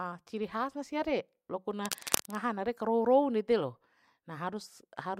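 From 1.85 to 2.35 s, cable scratch noise, likely a worn connector shifting, adds uneven scratchy bursts almost as loud as speech, not steady hiss.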